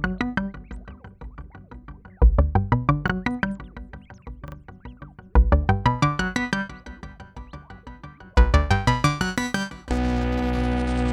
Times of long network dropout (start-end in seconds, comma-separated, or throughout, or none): none